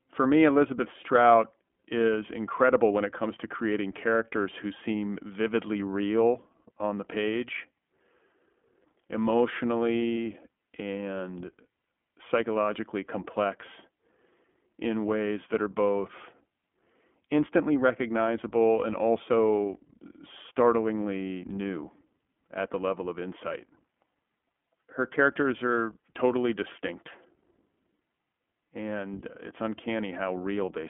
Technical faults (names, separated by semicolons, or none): iLBC codec